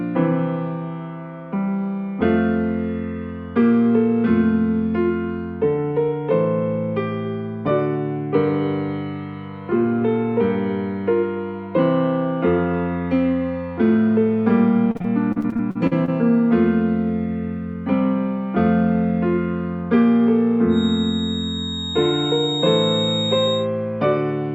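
From 14.91 to 16.10 s the audio breaks into repeated packet loss, heard as a robotic, choppy stretch. About a dozen short holes follow one another, the longest around 43 ms, and each is patched by stretching out the last sound, so roughly a quarter of this span is filled-in material. Unlike a single dropout, the rapid succession of patched gaps gives the stuttering texture rather than one clean silence.

From 20.67 to 23.69 s a thin, steady feedback whistle sits behind the audio at 3.7 kHz, about 10 dB below the main signal. It is likely caused by the loudspeaker-to-microphone loop hovering at the edge of feedback: the tone holds one pitch and swells and fades slowly in level without swelling into a howl. That single fixed frequency distinguishes it from broadband hiss or a tonal hum at mains frequency.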